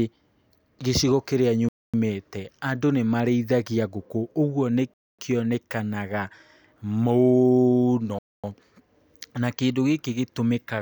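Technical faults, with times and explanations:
1.69–1.94 s, 4.94–5.19 s and 8.19–8.44 s: gap between chunks. The speech stops abruptly for 250 ms each time, then resumes where it left off. Nothing is lost. The audio arrived in 3-second pieces, and silence was inserted at each join, leaving hard-edged holes.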